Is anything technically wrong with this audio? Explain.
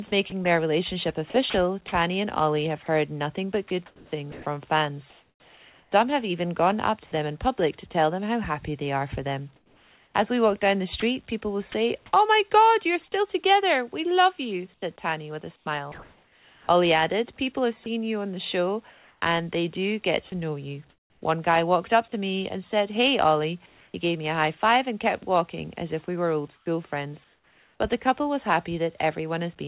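Yes. Two related faults appear, both tied to discontinuous transmission on the sending side. The call path itself carries nothing above 4 kHz, consistent with a narrowband telephone codec.

Sound chopped by the voice detector occurs at 0.08–7.12 s, 9.56–11.74 s, 14.74–22.12 s and 26.06–27.8 s. A voice detector, likely misjudging quiet passages, repeatedly stopped sending, so about 1.5 s, 0.62 s, 1.68 s and 0.68 s of sound respectively became synthetic noise. The result is choppy.

Comfort noise in place of the background fills 23.66–23.94 s. For 280 ms the real background, sitting about 35 dB below the loud parts, is likely replaced by receiver-generated noise after transmission paused. It sounds flat and featureless and drops about 2 dB before the original background returns.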